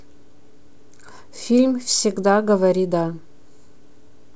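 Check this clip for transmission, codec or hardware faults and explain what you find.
No faults can be heard in this speech recording.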